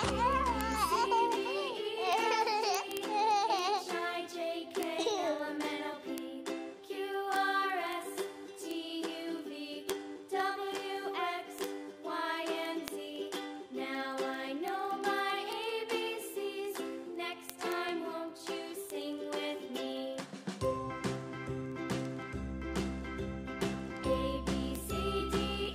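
Right across the audio, from 0.1 s to 25.7 s, there's a steady run of word clock ticks, sharp clicks coming roughly every 50 ms, so around five hundred of them in all. That pattern points to a digital link feeding a receiver that's running on its own clock instead of locking to the sender. With the two clocks drifting apart by something like 400 ppm, each slip drops or repeats a single sample, and that's the click you hear.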